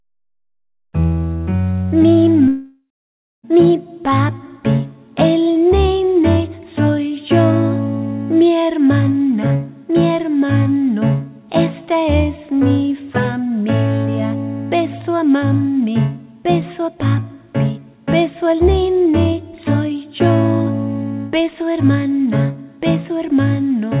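From 2.48 to 3.45 s the sound stops arriving. The last sound is stretched into a fading buzz. Then comes about 0.6 s of near silence. This is likely a long network dropout. Audio returns, still capped at 4 kHz, with nearly a second missing.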